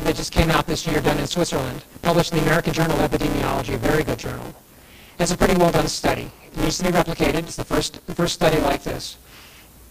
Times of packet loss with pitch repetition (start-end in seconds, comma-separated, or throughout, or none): none